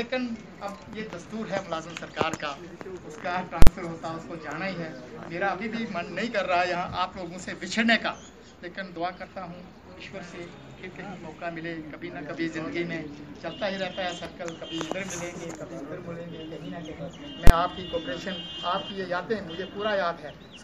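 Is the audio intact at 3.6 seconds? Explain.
No. From 3.62 to 3.67 s, invalid numbers at full scale: a calculation produced infinite or invalid values, pinning the output at one extreme for 46 ms, which fits a 2048-sample block. At that length it is heard as a single loud bang.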